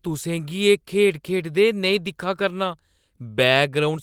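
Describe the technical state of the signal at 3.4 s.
At 3.4 s the speech signal is intact, with no dropout, clipping, glitch or other fault to be heard at that point.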